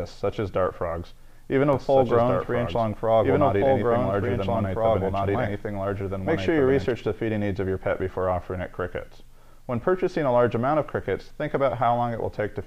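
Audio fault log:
1.73–6.91 s, doubled audio track: a second, full-band copy of the sound runs about a second and a half behind the first, at roughly the same level, so everything is heard twice. The copy has no decay or room colour and cuts in and out abruptly at both ends. This likely comes from the audio being captured again by a slower path, or from an edit holding two offset copies.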